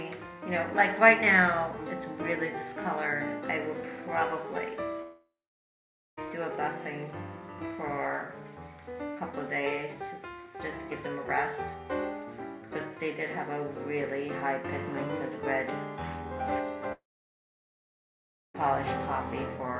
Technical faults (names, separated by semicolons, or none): long network dropout